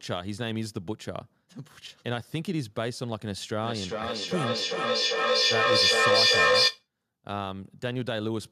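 Speech in which, from 3.63 to 6.88 s, every phrase returns roughly four tenths of a second later, thinner and ringing, with repeats building to about 9 dB above the speech: feedback echo between two devices, one replaying the other's microphone, beyond either echo canceller's reach.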